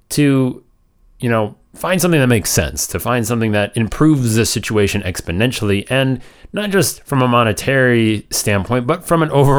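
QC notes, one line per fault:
No fault found in the speech clip.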